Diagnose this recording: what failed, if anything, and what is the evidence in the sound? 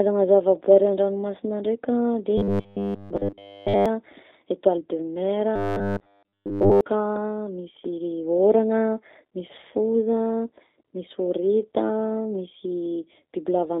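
The codec stage shows G.729 coding throughout: nothing reaches past 3.7 kHz, the line band runs from 250 Hz to 3.7 kHz, and the speech has a rough, synthetic grain that fits G.729A at 8 kbit/s. Unlike the buzz episodes, this roughness is constant and still follows natural pitch.

The driver or buffer stage shows robotic sound from repeated short buffers, from 2.38 to 3.86 s, just after "ndraika de", and from 5.56 to 6.81 s. A rigid, metallic 100 Hz buzz replaces all of the real audio. This is likely from the same 10 ms of audio being looped while fresh audio arrived too seldom.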